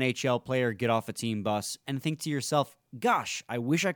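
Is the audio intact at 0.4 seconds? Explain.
Yes, at 0.4 seconds the audio is intact, with no dropout, glitch or other fault audible at that moment.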